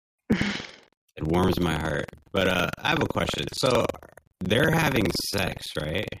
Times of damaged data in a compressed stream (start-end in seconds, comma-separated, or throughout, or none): none